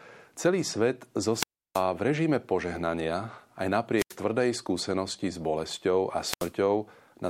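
Hiss rises and the speech drops into near silence at 1.33–1.84 s (a 326 ms hole), 3.95–4.16 s (86 ms) and 6.19–6.53 s, just after "skúsenosti s bolesťou" (78 ms). These are wireless microphone squelch dropouts: the FM radio signal faded until the receiver's squelch muted the output.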